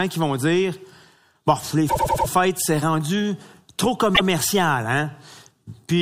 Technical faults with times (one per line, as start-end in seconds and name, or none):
1.89-2.27 repeated frames
4.14-4.26 repeated frames